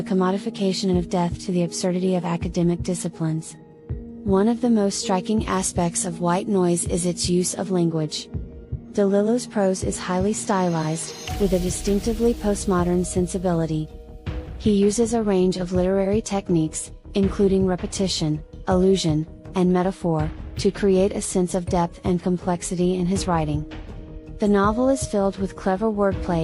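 Between 5.41 and 7.64 s, pre-emphasis was left on: the treble boost, which fits the CD 50/15 µs curve, went unreversed, leaving 10 kHz about 8 dB hotter relative to 1 kHz, so the sound turns thin, bright and sibilant there.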